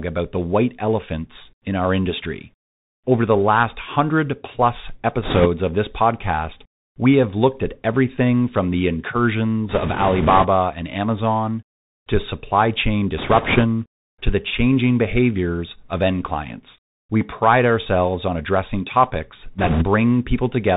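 Speech, carried throughout by a Bluetooth CVSD headset codec whose damage is plainly audible. Nothing above 4 kHz survives, but plain telephone band-limiting would sound clean. Here a granular hiss sits under the speech, s sounds turn scratchy, and loud high-frequency moments distort. CVSD encodes each sample as a single up-or-down bit and adapts its step size, so fast rises outrun the step. The character fits a 64 kbps CVSD link. Four short stretches add bit errors on a Bluetooth voice link: 5.23–5.47 s, 9.69–10.46 s, 13.17–13.64 s and 19.58–19.85 s. The first, at an error rate of several percent, is the roughest. Each shows up as a rushing, crackly noise laid over the speech, with no loud clicks, dropouts or repeated fragments. That separates it from packet loss. Every flipped CVSD bit carries only a small step and its effect decays quickly, so corruption smears into noise instead of snapping.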